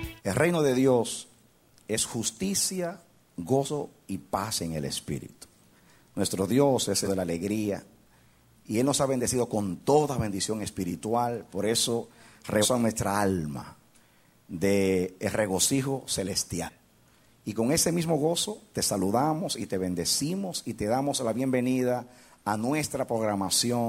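The audio jumps forward at 3.65, 7.04, 12.61 and 16.65 s. These are compressed frames skipped: whole 46.4 ms frames go unplayed, dropping roughly 150 to 200 ms each time.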